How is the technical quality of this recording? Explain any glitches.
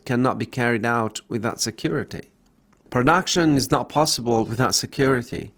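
The recording has one quality fault: a drop to a lower-bitrate version of an adaptive stream, starting at 1.84 s and lasting to the end. At 1.84 s the quality falls abruptly with no gap, and coding artefacts rise. The sound fits a player that switched from roughly 64 kbit/s Opus to about 16 kbit/s Opus when throughput dropped, and it never switched back up.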